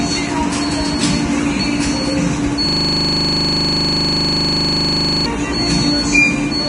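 From start to finish the audio is grainy and hissy, with nothing above about 10.6 kHz and roughened, smeared attacks. This is heavy damage from likely Vorbis compression, fitting a low bitrate near 31 kbps. Unlike a plain low-pass filter, the remaining treble turns into noisy grit rather than simply darkening.

From 2.69 s to 5.26 s, a system hang loop replays one 40 ms slice exactly, over and over. The computer or driver stalled while the hardware kept cycling its ring buffer, producing a steady 25 Hz buzz-stutter. Identical repeats, not random dropouts or clicks, set it apart from ordinary buffer underruns.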